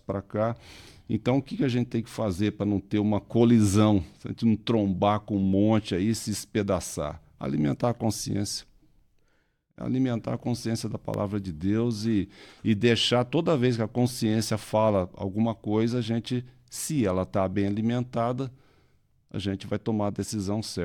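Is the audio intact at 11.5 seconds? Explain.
No, the audio is not intact at 11.5 seconds; it sits at the tail of a burst of CD scratch ticks running from about 11.14 to 11.49 s, just after "a consciência da". A blemish on the disc wipes out more data than error correction can rebuild on each pass, so the player patches or mutes the damaged samples. The result is three brief ticks, each well under a millisecond, spaced at a regular rotation-like interval across the speech.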